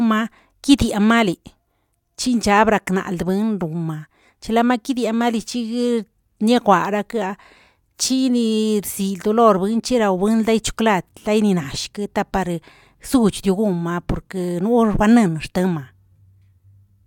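It's a speech recording, and there's nothing technically wrong to point to anywhere in it.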